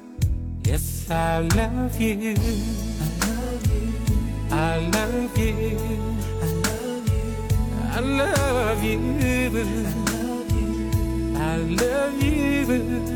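No faults can be heard anywhere in the audio.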